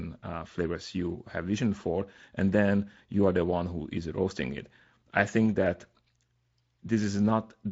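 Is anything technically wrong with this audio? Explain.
No, nothing here stands out as a technical problem; this speech clip comes through the Speex codec at a fairly generous rate, and nothing in it calls for attention.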